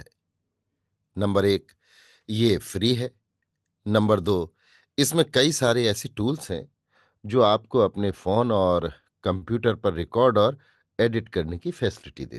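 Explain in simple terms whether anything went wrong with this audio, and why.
Two things go wrong, both in the second half. From about 6.50 s to the end, the speech suddenly turns dull and muffled, as if someone threw a blanket over it. That's de-emphasis applied wrongly: a treble cut meant to undo a treble boost was applied to audio that never had the boost, or was applied twice. The highs roll off smoothly and steeply, so the crisp edges of consonants fade and everything sounds duller than before.

Then at about 9.37 s, lasting until 9.44 s, there's a short stall from a late packet. A chunk of the call's audio arrived late, so the receiving end had nothing ready to play. It stretched the last bit of sound for about 43 milliseconds until the packet showed up, then picked up where it left off. Nothing gets skipped, but you hear a brief hold, a tiny smear or buzz in the speech at that moment.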